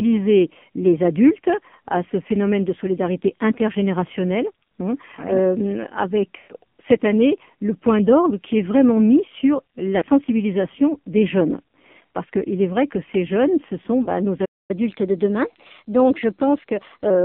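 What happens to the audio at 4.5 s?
At 4.5 s, as throughout, the speech runs through an AMR narrowband mobile codec at what sounds near 6 kbps. Only 150 Hz to 3.4 kHz survives, heavily buzzy and synthetic.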